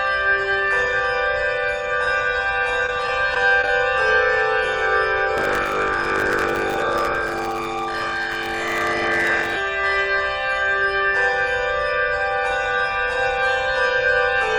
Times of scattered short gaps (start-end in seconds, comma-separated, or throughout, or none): 2.86-3.68